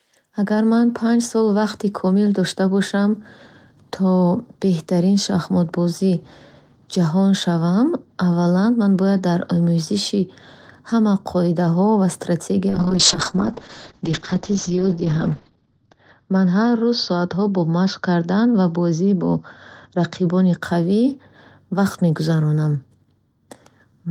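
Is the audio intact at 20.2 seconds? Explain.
No. At 20.2 seconds the speech is still inside a call bitrate drop that runs from 12.7 to 20.67 seconds. The encoder was pushed from 32 kbps down to 8 kbps, spending about 2.8 seconds at its lowest rate, so it codes coarsely and narrows the band from 20 kHz to 8 kHz. The result sounds muffled and watery. Unlike packet loss, the audio keeps flowing with no gaps or dropouts, and it clears as the bitrate climbs back.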